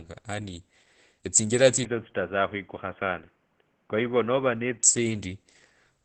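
From start to end, the speech carries heavy codec damage, likely from Opus compression. Nothing sounds above about 8.6 kHz. The tone is muffled and hoarse. This fits the encoder's speech mode at a very low bitrate, around 12 kbps. At that rate the codec models the voice coarsely and discards fine detail, leaving a thin, husky sound.

At 1.85 s the sound suddenly turns duller and boxier, with no gap at the change. This points to the input switching to a poorer device, likely a headset or call-profile microphone. Everything above about 3.4 kHz vanishes, giving a narrow, telephone-like band. The level drops a little, and a faint new background noise sits well below the voice. At 4.84 s the wider, brighter sound returns.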